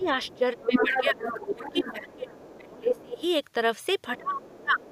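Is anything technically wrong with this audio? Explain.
Yes, there are two related echo-cancellation faults.

Speech suppressed in double talk occurs from 0.0 to 1.2 s, 1.54 to 3.22 s and 4.18 to 4.84 s. The talker's level dips by about 15, 25 and then 30 dB, most likely because the canceller could not separate this voice from the far-end echo while both talked and attenuated everything. Unlike a network dropout, the cuts track the other voice's presence.

The other side's voice leaking through appears at 0.03 to 0.38 s, 0.72 to 2.57 s, 2.9 to 3.02 s and 4.17 to 4.92 s. It is faint at first and at the end, and nearly as loud as the talker around 0.7 to 2.6 s. Residual loudspeaker echo was likely not fully removed. It is a distinct second voice, not the smeared tail of room reverberation.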